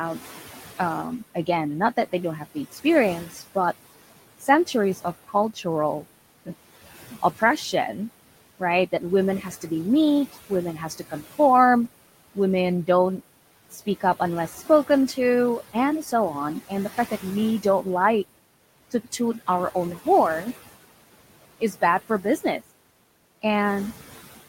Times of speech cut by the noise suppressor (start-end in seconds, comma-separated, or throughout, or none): 0.78-11.39, 12.35-17.86, 21.60-23.44